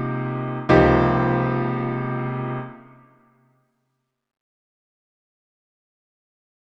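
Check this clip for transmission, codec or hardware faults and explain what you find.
No transmission, codec or hardware faults can be heard anywhere in the clip.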